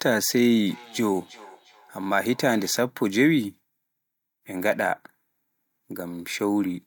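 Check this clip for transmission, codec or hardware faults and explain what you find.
One transmission fault: feedback echo between two devices, from 0.67 to 2.86 s. The speech returns as a faint, hollow repeat roughly every 0.4 s, each pass thinner and more ringing, peaking about 24 dB below the speech. Two devices on the same call share a room, and one replays what the other's microphone sent. That microphone picks it up again, and neither device's echo canceller removes sound played by the other device.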